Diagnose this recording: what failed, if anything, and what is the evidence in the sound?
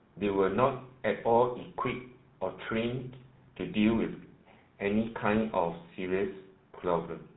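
GSM full-rate codec damage runs through the whole speech recording, so the fault lies at the codec stage. The audio has a buzzy, gravelly roughness throughout, and nothing is present above 4 kHz. The codec models the vocal tract as a filter and drives it with a sparse, regularly spaced pulse train that keeps only every third excitation sample. That coarse excitation produces the grainy buzz, and the band limit dulls the top end. The degree of damage fits a 13 kbps full-rate encode.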